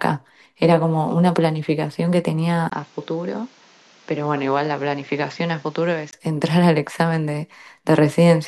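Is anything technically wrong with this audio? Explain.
Yes. From 2.70 s to 6.13 s the speech turns dull and boxy after a 20 ms gap, cutting off above 7.6 kHz, dropping about 5 dB, and gaining a noise floor about 30 dB down. This is likely an input switched to a poorer, narrower-band device, then switched back.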